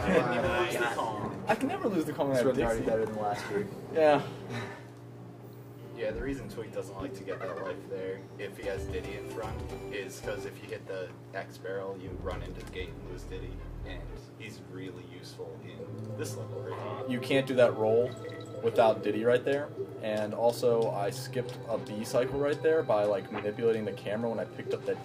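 Nothing stood out as a technical problem on listening.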